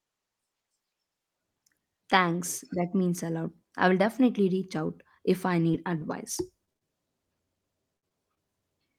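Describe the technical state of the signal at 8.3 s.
At 8.35 to 8.38 s there is short concealed packet loss: about 20 ms never arrived, the decoder extrapolated the preceding speech to cover it, producing a brief smeared wobble.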